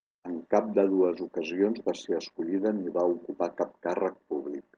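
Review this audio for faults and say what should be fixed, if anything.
Nothing needs fixing: the speech signal holds steady in level and continuity with no audible defect at any point.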